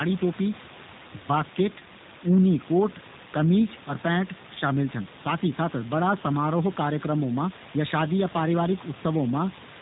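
Throughout the speech, the sound is band-limited, slightly rough and synthetic, with warbling on the room noise sitting about 15 dB below; this is G.729 codec damage, consistent with an 8 kbit/s stream.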